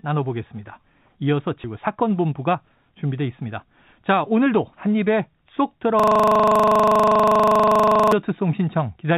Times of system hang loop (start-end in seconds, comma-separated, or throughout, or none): 6.00-8.12